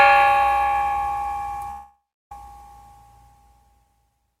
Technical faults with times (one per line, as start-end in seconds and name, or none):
1.70-2.32 long network dropout